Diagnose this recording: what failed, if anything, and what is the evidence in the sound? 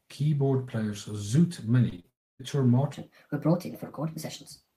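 Network stage, short concealed packet loss: three brief smears in the speech at 1.89–1.94 s, 1.96–2.00 s and 2.00–2.06 s, each a wobble where the sound briefly holds steady. About 20, 20 and 40 ms of audio never arrived in time. The receiver's concealment extended the preceding waveform to cover each gap and crossfaded back, so the gaps become smears rather than clicks or silence.

Network stage, long network dropout: from 2.10 to 2.41 s the speech stops. A brief continuation of the last sound fades out, and what follows is essentially silence until the audio resumes further on. Roughly 0.3 s of speech is simply missing. This is likely a stall in packet delivery long enough for the concealment to give up and mute, with the lost stretch never replayed.

Playback or editing stage, section at the wrong speed: from 2.93 s to the end, the speech runs 1.29 times too fast and sits about four semitones high, so it sounds high and hurried. 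Speed and pitch shift together, which indicates resampling against a mismatched clock rather than time-stretching. The likely cause is that this section was played or rendered at a rate different from the one it was recorded at.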